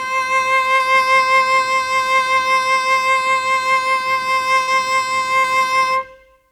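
A piece of music with three brief smears where the sound momentarily wobbles and blurs, at about 0.75 to 0.82 s, 4.63 to 4.70 s and 5.39 to 5.47 s. Each is short concealed packet loss: roughly 40 ms of audio never arrived, so the receiver covered the gap by extending the preceding sound for about 38 to 42 ms, then crossfaded back into the real signal.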